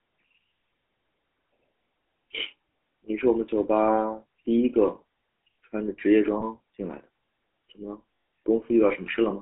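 The speech has passed through the GSM full-rate codec throughout. That codec rebuilds the voice from a vocal-tract model driven by regularly spaced pulses, keeping only a thinned excitation, and its plainly audible damage fits 13 kbps full-rate coding. The line band runs only from about 250 Hz to 3.4 kHz, so the sound is thin and boxy, and the coarse excitation lends the voice a buzzy, gravelly roughness.

Lost GSM frames occur at 6.40 to 6.43 s and again at 8.14 to 8.26 s. The decoder received bad frames and, for each, reused the last good frame's settings. The first gap, a single 20 ms frame, leaves a brief rough smear. The second, about 120 ms long, which fits six lost frames, turns into an audible metallic ring before the speech resumes.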